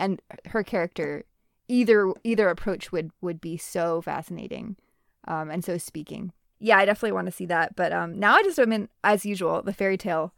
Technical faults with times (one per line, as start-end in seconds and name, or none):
none